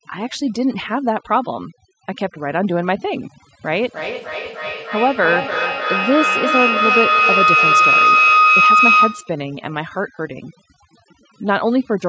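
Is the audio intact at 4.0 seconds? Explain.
No. At 4.0 s you're inside a feedback howl running from 3.83 to 9.42 s. Mic and speaker share a room and re-amplify each pass, so it builds into a tone around 1.5 kHz, with a loop delay of roughly 300 ms and peaking about 5 dB over the speech. There's also overdone noise removal throughout. It switches off frequency bands near the noise floor, so the background drops and breaks up into twinkling specks.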